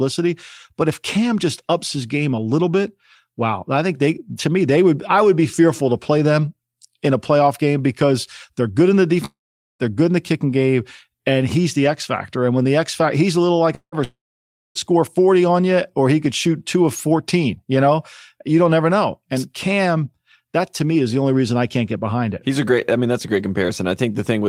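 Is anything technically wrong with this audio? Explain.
Yes. The speech breaks off three times: at 9.25 to 9.82 s, at 13.75 to 13.95 s, and at 14.04 to 14.78 s. Each time the last sound lingers as a short fading buzz, then gives way to silence, about 0.44 s, 0.08 s and 0.59 s of it, before the speech resumes further on with a stretch simply gone. This is likely a long network dropout: packets stopped arriving, the receiver stretched the final sound to cover the gap, then fell silent until audio returned.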